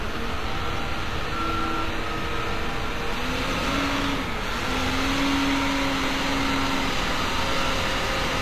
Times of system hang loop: none

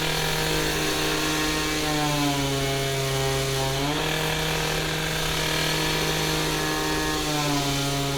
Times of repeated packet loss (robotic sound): none

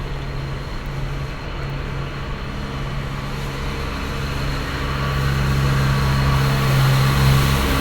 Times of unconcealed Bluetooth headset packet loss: none

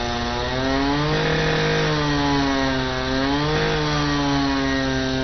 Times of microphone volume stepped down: none

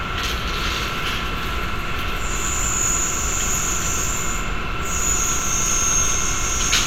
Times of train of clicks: 5.08-6.80

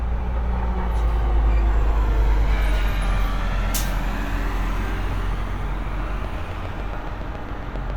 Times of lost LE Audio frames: 5.12

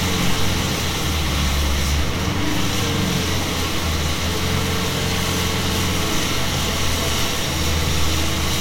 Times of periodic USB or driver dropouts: none

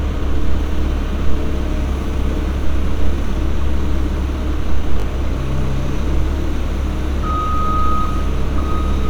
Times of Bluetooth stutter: 5.00-5.04

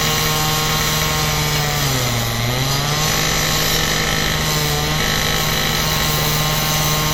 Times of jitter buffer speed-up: none

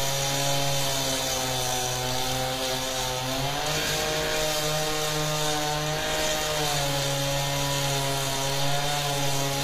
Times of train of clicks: none

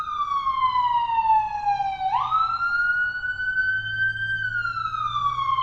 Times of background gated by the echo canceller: none

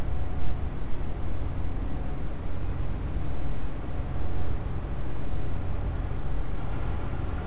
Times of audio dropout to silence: none

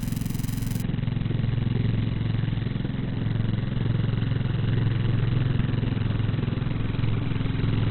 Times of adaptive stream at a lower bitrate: 0.82-7.90

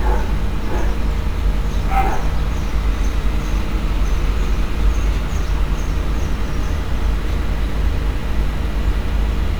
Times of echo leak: none

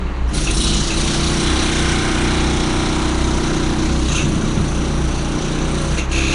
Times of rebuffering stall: none

